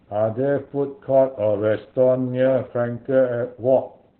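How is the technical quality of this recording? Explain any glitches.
The recording is heavily degraded by low-bitrate compression. Opus voice compression runs throughout: a narrowband SILK coder, consistent with about 8 kbps, discards everything above 4.4 kHz and coarsely codes the rest, leaving muffled, hoarse, slightly robotic speech.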